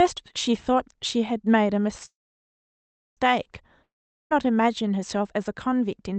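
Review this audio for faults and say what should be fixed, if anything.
A call audio freeze runs from 2.05 to 3.19 s. The last sound is stretched into a fading buzz, then about 1.05 s of silence, and the speech resumes exactly where it stopped. The likely cause is delayed packets draining the jitter buffer. Unlike a dropout, nothing is lost; the rest of the clip simply arrives about 1.1 s later. A larger adaptive jitter buffer and a steadier network route would prevent this.

A long network dropout spans 3.83 to 4.33 s. The last sound fades over a few hundredths of a second into roughly 0.43 s of silence. When the speech comes back, about 0.48 s of it is missing, which sets this apart from the earlier freeze. No audio arrived for that stretch, likely because the packets were lost. Forward error correction or redundancy in the call codec, together with fixing packet loss on the link, would prevent it.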